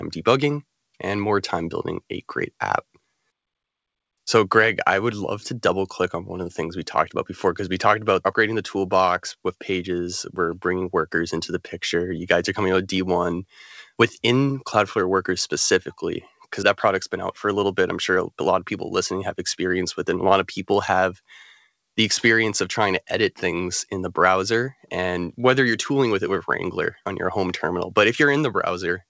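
No technical faults can be heard anywhere in the speech. It has passed through a WebRTC call path whose wideband codec sounds like G.722, with nothing above 8 kHz, as that codec delivers.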